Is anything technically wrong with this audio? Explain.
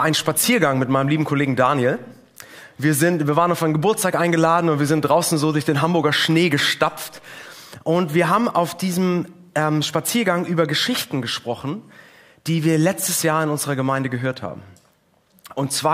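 No, no technical faults detected.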